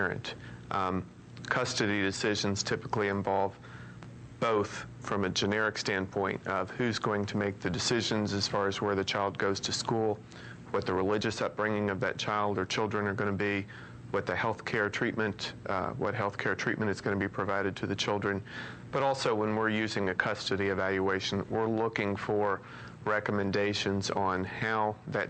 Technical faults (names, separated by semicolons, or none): none